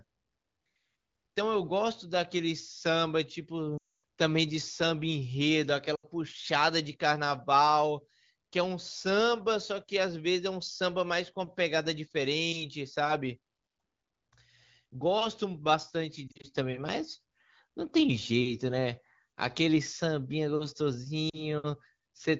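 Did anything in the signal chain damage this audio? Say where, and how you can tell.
Yes. Lost AMR speech frames on the radio link, at 3.77–4.02, 5.95–6.05, 16.28–16.47 and 21.29–21.45 s. The decoder repeats the last good frame, which fades quickly and is longest at 3.8 s.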